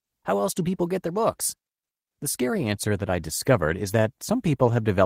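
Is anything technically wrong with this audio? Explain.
No, nothing technically wrong can be heard in this speech recording. There is no fault to point to or explain.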